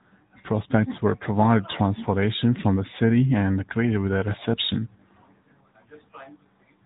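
From start to finish the speech carries AMR narrowband mobile codec damage. The signal passed through a mobile-phone speech coder at 10.2 kbps, which rebuilds the voice from a vocal-tract model and a sparse pulse excitation. Nothing above 3.8 kHz survives, leaving a muffled telephone tone with a plainly audible buzzy, synthetic edge.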